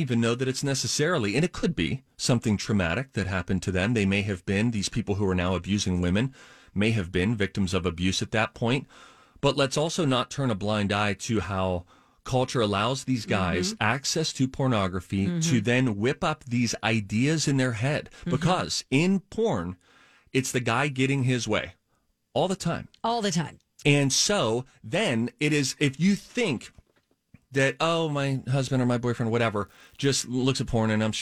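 A speech recording with an unreliable data bit from 29.62 to 30.13 s, just after "husband or my boyfriend". For that half second, one marginal bit line flips at random, adding identical spikes of about −41 dBFS that make a fizzing crackle heard even between syllables. On a waveform it shows as a scatter of equal-height needles riding on the signal, and on a spectrogram as a broadband speckled haze across all frequencies for that span.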